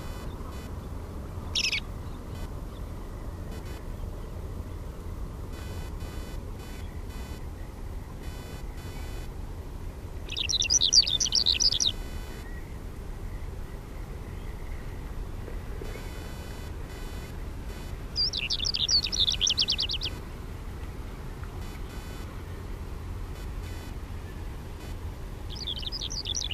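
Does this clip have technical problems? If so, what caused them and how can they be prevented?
Yes. Computer activity noise runs through the whole clip: a buzzing, chirping layer pulsing at around 500 times a second, sitting roughly 20 dB below the sound and rising and falling with the computer's workload rather than with anything in the recording. Changing current draw from the processor, graphics card or mouse shifts the ground that the audio circuit shares with them, and that fluctuation rides straight into the signal path. Using an external audio interface or USB isolator, keeping audio cables away from the computer, and breaking ground loops prevents it.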